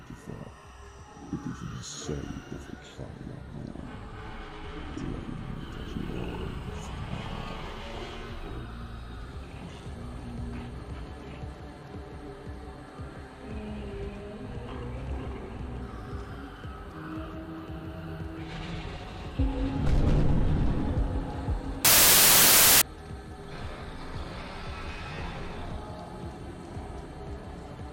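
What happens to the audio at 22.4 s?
A wrong sample width fault runs from 21.85 to 22.82 s. Each value is read as four bytes when the data fit packed three-byte samples, so most values mix bytes from neighbouring samples. The result is loud noise with the original sound buried underneath, playing 1.33 times too fast and raised in pitch.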